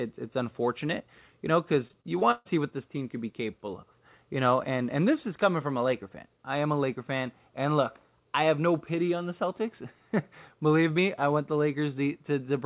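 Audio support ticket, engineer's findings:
Repeated packet loss (robotic sound), 1.88 to 2.47 s. Choppy texture. Five dropouts, longest 138 ms. About a third of the span is patched. Packets lost or late again and again: lost audio is rebuilt by repeating the last sound, and gaps follow too closely. Call path itself: nothing above 4 kHz. This fits a narrowband telephone codec such as G.711.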